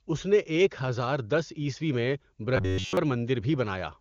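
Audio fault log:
2.57–2.97 s, robotic sound from repeated short buffers. The speech becomes a rigid, metallic buzz pitched near 93.8 Hz. It still follows the words loosely. The likely cause is that new audio stopped arriving in time. Playback looped a tiny slice, about 10.7 ms long, and that length sets the buzz pitch. The whole stretch is repeats, so the real audio there was skipped, while the AMR-WB wideband coding around it adds at most faint damage.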